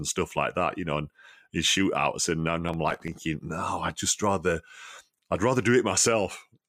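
From 2.68 to 3.28 s the processor falls behind and misses its deadlines over and over. The buffers point to very small blocks, well under a millisecond each, and some thirty of them go unfinished. Each missed block is skipped outright, so the speech jumps forward with a hard edge every time. Packed this densely, those tiny jumps merge into a gritty, tearing processor overload crackle riding on the speech for just over half a second.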